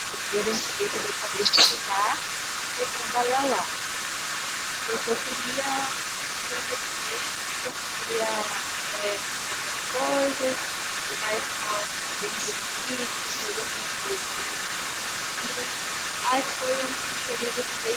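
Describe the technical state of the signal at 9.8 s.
At 9.8 s the speech carries an echo leak, present from 0 to 17.96 s. A delayed copy of the voice comes back about 113 ms behind, only a little quieter than the original. This is likely a far-end loudspeaker echo the canceller failed to remove.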